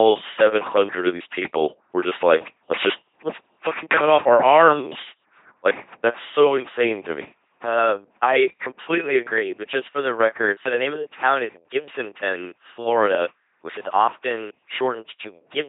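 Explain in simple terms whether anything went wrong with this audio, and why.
Throughout, the speech has passed through an LPC-10 vocoder with heavy damage. It rebuilds each moment as either a buzz or a hiss fed through a simple mouth-shape filter, so everything sounds robotic and mechanical, with nothing above 3.8 kHz.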